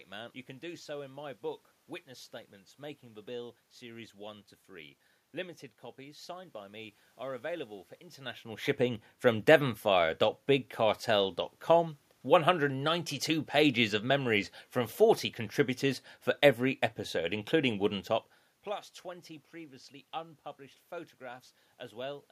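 Nothing here points to a problem with the system; the room noise belongs to the recording itself, and the level shifts around 8 s and again near 18 s are just the talker moving relative to the microphone.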